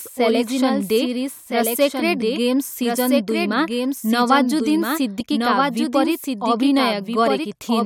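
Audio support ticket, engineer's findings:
Doubled audio track, whole clip. Second copy of the speech trails the original by roughly one and a half seconds. Copy sits about 5 dB lower. Full band, dry, no decay or room colour. Likely cause: the signal captured twice, once via a slower path, or an edit holding two out-of-step copies. Both summed into one track.

Damaged data in compressed stream, two events. Short blips at 5.19–5.21 s and 7.43–7.45 s, each about 20 ms. Probable component: decoder input. Corrupted bytes in the encoded frames. Decoder misreads them, loses sync, then hunts for the next valid frame header. Output breaks briefly.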